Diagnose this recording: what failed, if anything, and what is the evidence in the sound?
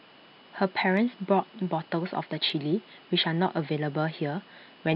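Nothing in the recording points to a failure at any stage of the chain. The speech runs continuously, with no audible event that would mark a break in the signal path.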